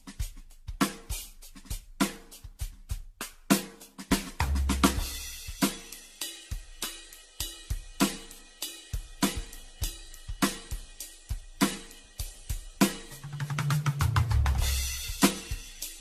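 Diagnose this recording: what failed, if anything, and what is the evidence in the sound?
The music sounds swirly, smeared and hollow throughout, with blurred attacks and nothing above 14 kHz. That is worse than one low-rate encode would give. This is generation loss at the codec stage, likely from about ten AAC passes near 64 kbit/s, each requantising on a shifted frame grid.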